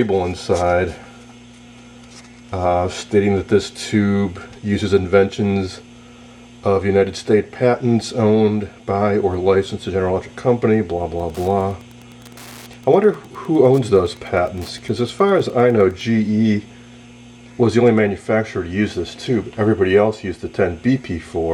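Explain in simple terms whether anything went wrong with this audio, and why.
Wi-Fi interference: from 11.1 to 16.0 s, a nearby Wi-Fi radio leaked into the audio circuit, which picked up its regular signal every 102.4 ms. That adds a steady ticking, about ten times a second, sitting well below the main sound.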